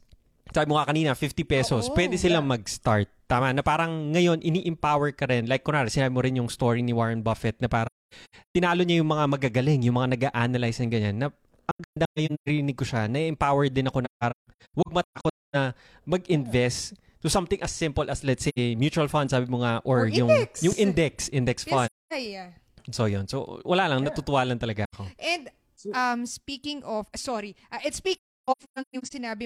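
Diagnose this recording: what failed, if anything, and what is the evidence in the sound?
AAC frame loss with muting at the codec stage: soft-edged dropouts at 7.86–8.56, 11.71–12.49, 14.04–15.56, 18.48, 21.86–22.13, 24.84 and 28.19–29.13 s, where zeroed frames fade out and back in.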